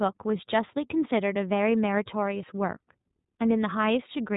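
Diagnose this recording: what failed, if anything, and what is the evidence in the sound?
The codec stage is the problem: the speech has gone through iLBC, and you can plainly hear it. The whole 4 s clip is band-limited with nothing above 4 kHz, so it has that dull narrowband phone quality. The voice also sounds a bit rough and synthetic the whole way through. The texture fits 30 ms frames whose excitation is coded independently, likely in the 13.33 kbps mode. Each block gets rebuilt without help from the previous one, which leaves that grainy edge.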